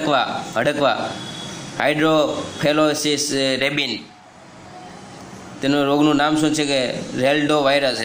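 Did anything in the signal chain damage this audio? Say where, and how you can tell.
No, nothing in the chain has left an audible mark, and the signal holds steady throughout with no dropouts, clipping, hum or timing disturbances to point at any stage.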